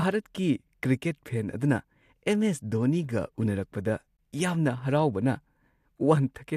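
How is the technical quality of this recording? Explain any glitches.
The recording has one glitch, a gap at a join of encoded pieces, from 4.17 to 4.19 s. The speech appears to have been encoded in separate pieces of about 6 s each and then joined without trimming. The encoder's start-up delay and last-frame padding were left in at the seam. The result is a gap of about 21 ms in the continuous speech, its edges smeared by the codec, before the speech resumes exactly where it broke off.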